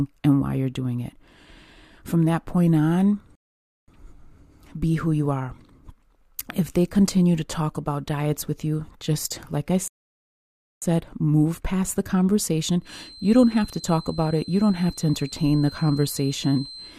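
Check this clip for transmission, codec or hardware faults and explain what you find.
Two kinds of fault are present: a pair of rebuffering stalls and a feedback whistle near the end.

Rebuffering stalls occur at 3.35 to 3.88 s and at 9.88 to 10.82 s. Each time, the player drained its store of downloaded audio and had to halt until more data came in. The speech drops to dead silence and then picks up at exactly the point where it broke off. Nothing is skipped, but the gaps add about 0.52 s and 0.94 s to the running time.

A feedback whistle runs from 12.79 s to the end. The likely cause is a loudspeaker-to-microphone loop held just short of instability, so a single frequency near 4.1 kHz keeps ringing without building up. It sounds like a thin, steady tone sitting behind the speech, roughly 20 dB below it, that swells and fades slowly in level.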